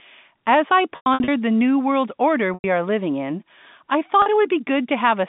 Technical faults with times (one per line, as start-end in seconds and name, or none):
0.96-1.28 packet loss with pitch repetition
2.54-2.64 packet loss with pitch repetition
4.22-4.26 packet loss with pitch repetition